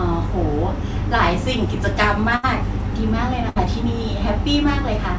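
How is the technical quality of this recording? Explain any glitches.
The recording has two bursts of packet loss. Beneath them, the sound stops at 8 kHz, which fits a wideband call codec such as G.722. At 2.36 to 2.45 s and again at 3.49 to 3.58 s, consecutive packets arrived too late or not at all. The receiver stretched the last sound for about 72 ms and 64 ms, fading it into a held buzz or hiss, then jumped ahead past roughly 80 ms and 60 ms of missing speech.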